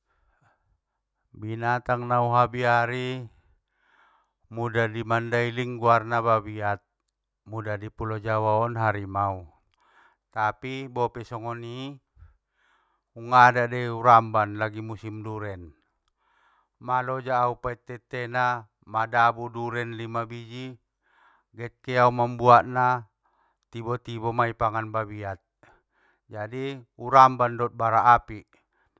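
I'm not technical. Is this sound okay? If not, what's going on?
Yes, the recording comes across as technically sound, with no faults to be heard anywhere in the speech.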